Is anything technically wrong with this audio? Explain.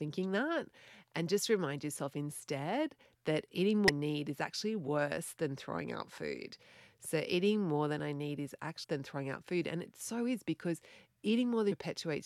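Yes. Damaged data in a compressed stream: brief glitches at 3.88 s (after "yourself instead that eating"), 8.83–8.85 s (after "than I need is") and 11.71–11.73 s, where corrupted frames throw the decoder out of sync. Each appears as a thin vertical disturbance on the spectrogram and a sharp glitch in the waveform.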